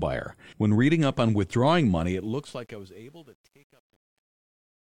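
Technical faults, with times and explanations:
1.99 to 4.96 s, truncation distortion on a fade: the speech fades out smoothly in level over roughly its last three seconds, but the gain stage discards low-order bits without dither, leaving resolution that fits about 9 bits. From 2.66 s to the end the quiet tail turns gritty. On a waveform this appears as coarse staircase steps. A spectrogram shows broadband hash around the harmonics that flickers on and off with level.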